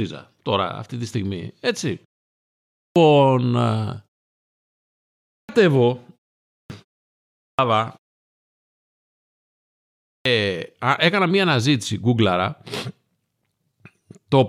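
Clipped start after a pause at 2.66, 5.19, 6.40, 7.30 and 9.94 s in this speech: the output device sleeps during each silence and swallows about 0.3 s of the following onset.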